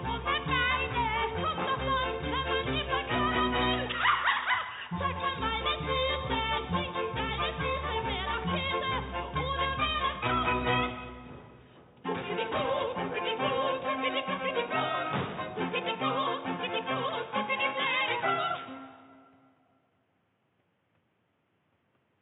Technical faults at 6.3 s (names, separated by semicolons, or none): none